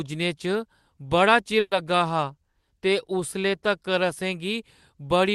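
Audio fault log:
1.59 to 1.74 s, burst of packet loss: about 120 ms of speech goes missing, papered over by a fading smear of the last sound, then a brief silence.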